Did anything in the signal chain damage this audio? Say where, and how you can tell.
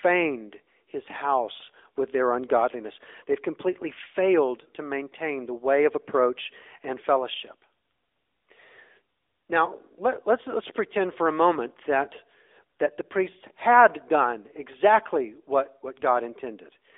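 Yes. The damage happens at the codec stage and runs through the whole clip: this is speech passed through the AMR narrowband mobile codec (AMR-NB). Nothing is present above 3.7 kHz, and the audible band sits between 300 Hz and 3.6 kHz, so it sounds like a phone line. The codec rebuilds the voice from a vocal-tract model driven by sparse pulses. That leaves a plainly buzzy, synthetic texture, which fits a mid-range mode around 10.2 kbps. On a spectrogram, the energy stops abruptly at that ceiling, and the harmonics look smeared in 20 ms blocks.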